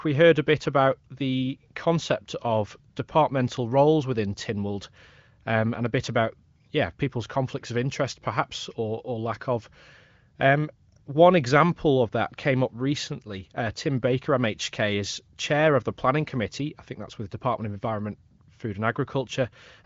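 Nothing goes wrong anywhere in this speech recording; it simply sounds like an ordinary HD Voice call, with the AMR wideband codec running at a high rate of 23.05 kbit/s and the audio topping out at about 7.5 kHz, just as that kind of call is meant to.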